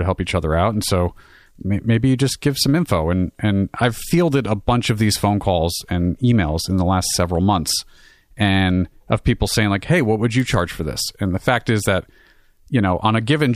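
Nothing in the recording stood out as a technical problem on listening.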